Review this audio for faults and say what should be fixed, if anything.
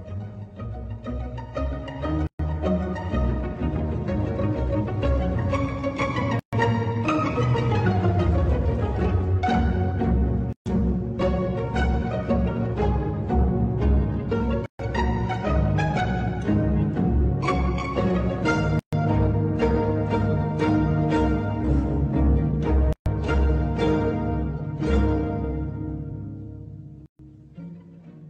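There's a gap at a join of encoded pieces at 2.27, 6.39, 10.53, 14.66, 18.79, 22.93 and 27.06 s. Each gap lasts about 125 to 133 ms, with smeared edges, and the sound then resumes right where it stopped. The regular spacing points to separately encoded chunks joined with each encoder's start delay and last-frame padding left in. To fix it, trim the encoder delay and padding from each piece before joining, or encode the whole thing in one pass.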